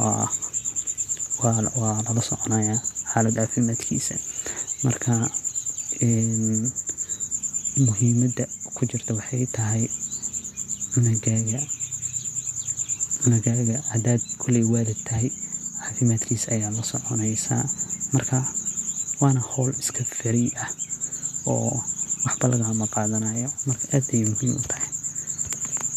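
No technical faults turn up anywhere in this speech recording.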